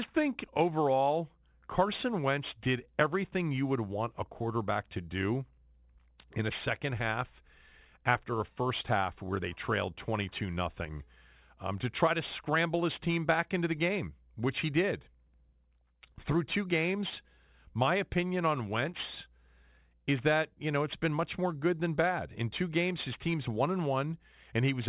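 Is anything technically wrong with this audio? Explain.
Yes. Throughout, the speech's sibilants sound gritty and metallic, crowding up to 4 kHz. This is aliasing: unfiltered downsampling, fitting an 8 kHz rate, folds high content back about 20 dB down.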